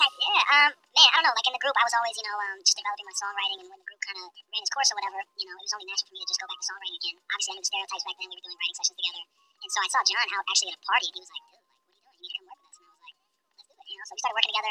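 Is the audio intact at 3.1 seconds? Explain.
No. At 3.1 seconds, as throughout, the sound runs 1.5 times too fast and about 7 semitones high: a wrong sample rate, consistent with 32 kHz material played at 48 kHz.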